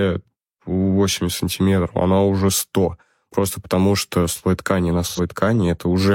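At 5.07–5.2 s, after "что слой ткани на", AAC frame loss with concealment smears 85 ms with recycled spectrum, unlike a dropout's silent gap.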